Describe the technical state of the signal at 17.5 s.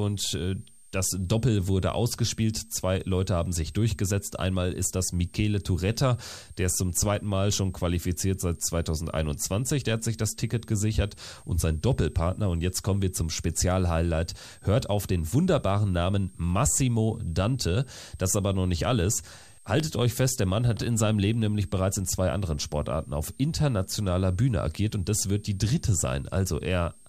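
At 17.5 s the speech carries a switching supply whistle that runs through the whole clip rather than starting or stopping near this point. A switching power supply in the chain is running in an audible burst mode or beating against another supply, leaking a high whistle into the audio. Its pitch wanders between about 8.0 and 8.9 kHz, sitting roughly 30 dB below the speech.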